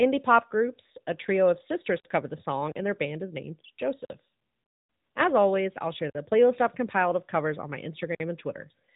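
From start to finish the speech carries the sound of an AMR narrowband mobile codec, with plainly audible codec damage. The encoder rebuilds the voice from a vocal-tract model and a sparse pulse excitation in 20 ms frames, so the voice comes out buzzy and somewhat synthetic, a character that fits a mid-range rate of around 10.2 kbps. A spectrogram shows everything above 3.8 kHz simply empty, a hard ceiling across the whole clip.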